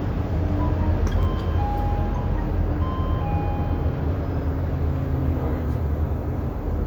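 At 1.23 to 1.25 s, a 10 ms chunk plays one chunk late, so two adjacent pieces are out of order. Nothing is lost, but the swap leaves a brief jumbled flicker. The waveform shows abrupt discontinuities at the joins, and the spectrogram shows thin vertical broadband lines there.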